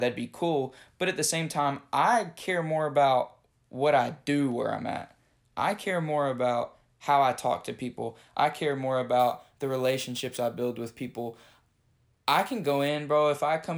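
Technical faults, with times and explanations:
9.20–12.88 s, crude rate conversion: after "people I care more", a gritty, inharmonic fizz trails the louder, brighter speech, roughly 25 dB down. Unfiltered nearest-sample repetition, consistent with a 32 kHz to 44.1 kHz change, leaves a recurring timing error that forms unrelated tones.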